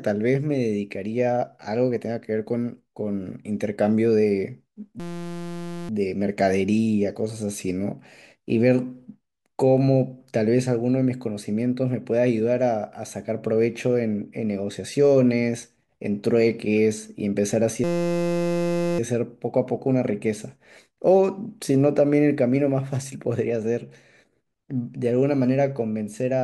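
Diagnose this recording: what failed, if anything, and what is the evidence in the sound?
A system hang loop at the driver or buffer stage occurs twice, from 5.00 to 5.89 s and from 17.84 to 18.99 s. Each time the speech gives way to a steady pitched buzz at 172 Hz: one 5.8 ms slice repeats exactly, which fits a 256-sample ring buffer the hardware kept replaying while the host stalled. Little or no audio appears to go missing. A dropout would leave silence and a codec glitch would vary, but this tone is perfectly periodic.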